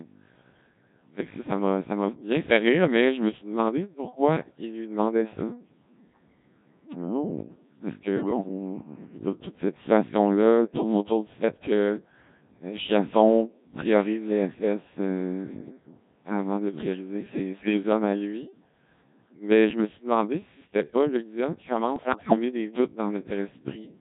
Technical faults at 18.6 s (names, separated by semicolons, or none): Codec 2 vocoder